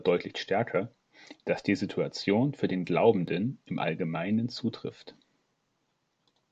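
No technical faults can be heard anywhere in the recording.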